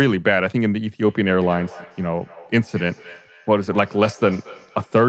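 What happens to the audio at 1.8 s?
A feedback echo between two devices, running from 1.06 s to the end: one device replays the other's microphone, which recaptures it, so each sound returns about every fifth of a second, thinner and ringing, up to about 20 dB below the speech.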